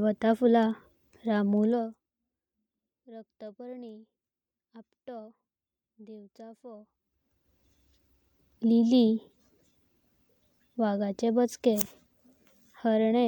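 Zipper noise runs from 1.64 to 2.13 s, while the speech level drops by roughly 25 dB. The gain falls in a rapid staircase of around 200 small jumps a second instead of gliding, so each jump puts a tiny click into the waveform. Heard together, those clicks form a fine buzzy ticking laid over the speech for that half second.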